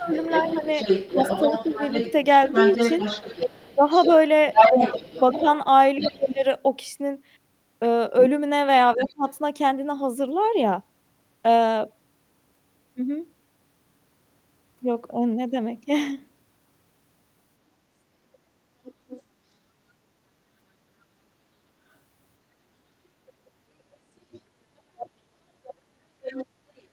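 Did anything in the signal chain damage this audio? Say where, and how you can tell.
Yes, in the call processing. Speech is suppressed in double talk at 0.0–1.79 s, 3.72–6.43 s, 8.95–9.27 s and 23.93–24.34 s, dipping about 10 dB early on and nearly vanishing later. The likely cause is an echo canceller that couldn't separate the two sides and ducked both.

The other side's voice is leaking through too: nearly as loud as the talker from 0.06 to 6.11 s, faint scraps at 8.96–9.31 s and 18.84–19.21 s, then moderate from 24.33 s to the end. That's likely loudspeaker echo the canceller left behind.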